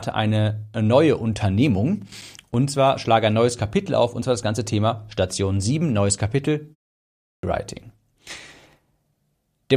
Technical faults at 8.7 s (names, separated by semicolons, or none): none